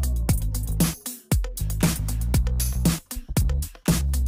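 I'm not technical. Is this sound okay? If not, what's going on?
No. From 1.91 s to the end there's crude rate conversion. Samples were simply dropped to change the rate, which fits 48 kHz to 44.1 kHz, so a gritty, out-of-tune fizz rides on louder, brighter moments. Unlike clipping, it doesn't need loud peaks to appear.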